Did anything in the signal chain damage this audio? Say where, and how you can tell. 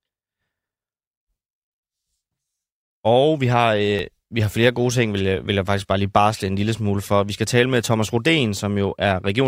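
Yes. A block of digital silence at 3.99 s, between "vi har" and "vi har flere gode", points to the driver or buffer stage. The speech drops out for about 1.9 ms and returns without a fade, so the gap is heard as a tick or dip rather than as silence.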